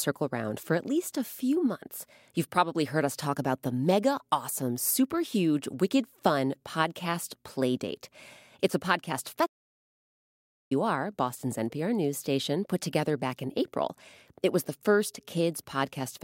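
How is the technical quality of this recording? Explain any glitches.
The recording has one clear glitch, a playback stall partway through the speech.

Playback stall, from 9.45 to 10.72 s: right after "a podcast" the sound cuts out completely for about 1.25 s, then picks up again. The likely cause is the player running short of buffered data, or its audio thread being held up, so nothing reached the output until it recovered. The gap sounds like an abrupt drop into silence in mid-flow rather than a natural pause.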